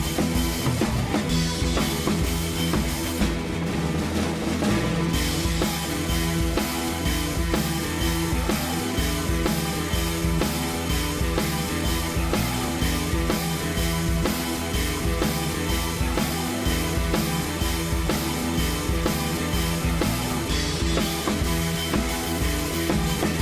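No technical faults detected.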